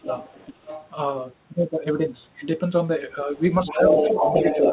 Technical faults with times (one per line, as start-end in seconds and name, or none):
0.00-0.07 speech suppressed in double talk
0.05-0.89 other side's voice leaking through
3.65-4.73 other side's voice leaking through
3.69-4.26 speech suppressed in double talk
4.55-4.72 speech suppressed in double talk